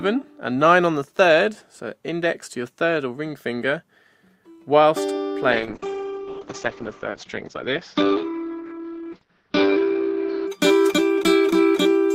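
From 5.53 s to 10.53 s a call bitrate drop sets in. The audio turns rough and watery, and the top end vanishes above 6 kHz where it had reached 20 kHz, which fits the encoder falling from around 64 kbps to about 8 kbps. Unlike packet loss, nothing drops out or glitches; the sound stays continuous but coarsely coded. Unlike a simple low-pass filter, the smeared artefacts show the encoder is starved of bits.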